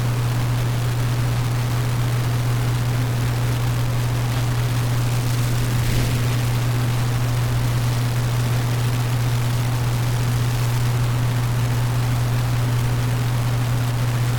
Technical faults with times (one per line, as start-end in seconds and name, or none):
0.00-14.39 low bit depth without dither